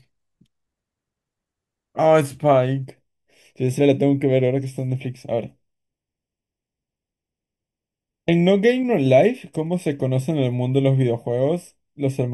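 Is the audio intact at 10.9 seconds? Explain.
No. At 10.9 seconds the speech is affected by channel delay (comb filtering), which begins at 2.85 s and runs to the end. One channel lags the other by under half a millisecond, and when the two are summed to mono their shared content cancels at evenly spaced frequencies, starting around 1.5 kHz. The speech sounds hollow and phasey. Unlike an echo, there is no audible repeat, and the notches stay fixed rather than sweeping as in flanging.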